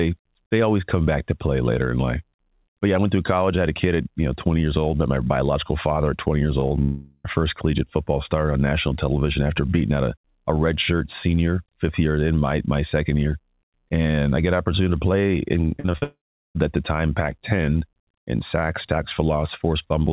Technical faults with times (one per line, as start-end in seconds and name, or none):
6.60-6.72 short concealed packet loss
6.82-7.26 long network dropout
15.68-16.04 repeated packet loss (robotic sound)
16.04-16.57 long network dropout